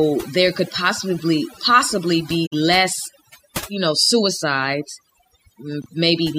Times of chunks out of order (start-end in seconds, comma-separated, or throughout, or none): 5.82-5.86